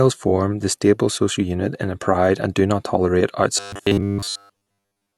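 Audio likely arrived too seldom from 3.58 s to 5.18 s, just after "and do not tolerate", so playback repeated a 10 ms slice through most of that stretch. This is robotic sound from repeated short buffers: the speech becomes a rigid, metallic buzz at 100 Hz.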